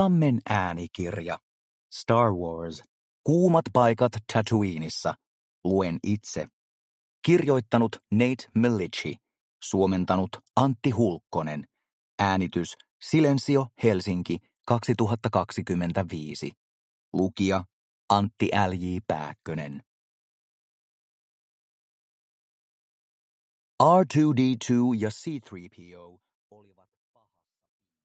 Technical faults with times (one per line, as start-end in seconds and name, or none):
none